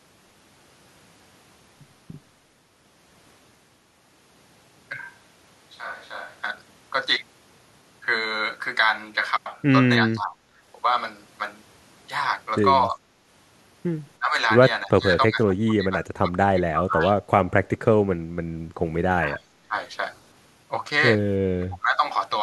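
Speech recording with two kinds of fault. From 4.98 to 6.40 s the sound abruptly turns roomy and hollow, with thinner low end, a level drop of roughly 5 dB and room noise rising to about 25 dB below the speech, then snaps back. That is the signature of a switch to a distant microphone, likely because the close microphone's feed dropped out and a farther pickup, such as a camera mic, filled in. The second fault is speech suppressed in double talk, heard as brief dips and choppy partial cutouts at 10.07–10.55, 12.91–12.99, 14.19–14.37, 14.86–15.05, 15.28–16.34, 16.52–17.02, 19.16–19.74 and 21.57–22.05 s. Attenuation ranges from roughly 10 dB in the short event near 12.9 s to around 25 dB at 16.5 and 19.2 s. The likely cause is an echo canceller that could not tell this talker from loudspeaker echo while the far side was also talking, so it pulled the near-end speech down.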